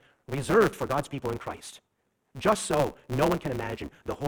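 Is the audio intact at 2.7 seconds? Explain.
No. At 2.7 seconds the speech carries a block size mismatch (truncated), present throughout the clip. Each block, which fits a 512-sample write, loses its tail before the next stage reads it. This gives a buzz near 138 Hz, and the speech runs about 1.6 times fast with its timbre kept.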